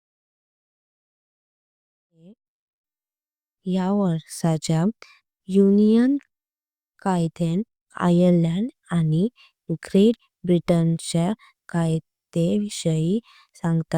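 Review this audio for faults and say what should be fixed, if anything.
Nothing here needs fixing. The speech fades in smoothly from around 2 s and reaches full level at 3.26 s, with no click or hard edge.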